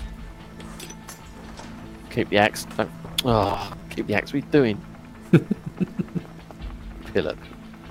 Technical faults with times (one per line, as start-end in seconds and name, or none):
3.43-3.82 robotic sound from repeated short buffers